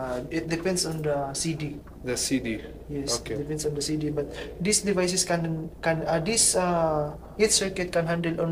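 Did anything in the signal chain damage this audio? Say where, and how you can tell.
No, nothing in the signal chain audibly damaged this audio. No stage, from capture through conversion, transmission and storage to playback, has left any mark that can be heard.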